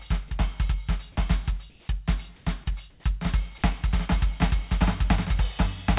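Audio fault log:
Throughout: doubled audio track. A second full-band copy of the music runs roughly 0.7 s behind the original at about the same level, with no decay or room colour, most likely from a slower second capture path or two out-of-step copies in an edit.
1.70–1.88 s, 2.36–2.46 s, 2.90–3.04 s: comfort noise in place of the background. In each gap the quiet background, sitting about 33 dB below the loud passages, turns into steady, featureless hiss. It is about 2 dB quieter in the first gap, unchanged in the second and about 5 dB quieter in the third. The likely cause is discontinuous transmission on the call path, where the receiver fills paused stretches with synthetic noise. That path also leaves nothing above 4 kHz.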